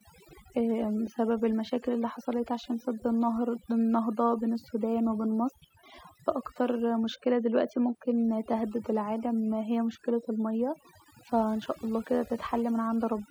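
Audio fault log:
throughout, overdone noise removal: a noise reduction stage set too aggressively pulls individual frequency bands down or off wherever they sit near its noise estimate, taking quiet speech detail too, so the background drops and breaks up into twinkling specks.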